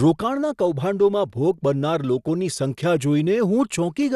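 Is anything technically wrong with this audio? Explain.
Yes. Likely MP2 compression, throughout: bits run short, so sub-bands above 12.1 kHz are cut and the rest coarsely quantised, making the speech dull and gurgling, as fits about 80 kbps.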